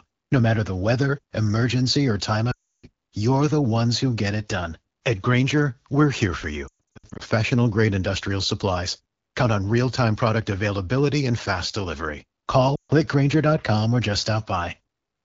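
The speech drops to near silence at 2.51–2.86 s after "weather emergency or time", warbles in scattered dips at 6.67–7.22 s, and fades again at 12.75–12.92 s. These are lost AMR speech frames, each gap filled by repeating the last good settings with falling gain.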